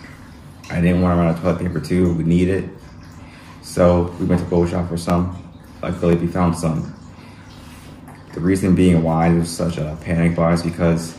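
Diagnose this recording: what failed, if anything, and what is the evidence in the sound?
Driver or buffer stage: periodic USB or driver dropouts. Ticks recur every 1.02 s from 1.00 to 7.15 s. About half a millisecond of audio is skipped each time.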